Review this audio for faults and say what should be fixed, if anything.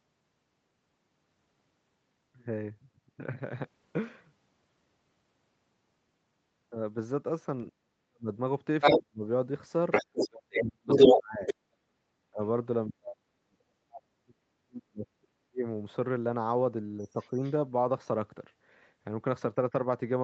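Speech suppressed in double talk occurs at 7.7 to 8.3 s, 8.97 to 9.23 s, 10.02 to 15.66 s and 16.99 to 17.41 s. The long middle stretch is affected for about 4 s. The talker drops by about 40 dB, and by about 10 dB in the last one. The echo canceller likely ducked both sides while they overlapped.

The other side's voice leaking through is heard at 8.81 to 9.01 s and 9.91 to 11.54 s. It comes through about 10 dB louder than the talker. A faint scrap, about 30 dB down, follows at 17.21 to 17.52 s. The echo canceller likely left loudspeaker sound in the microphone signal.

A headset, or better-tuned echo cancellation with stronger double-talk detection, would prevent both faults.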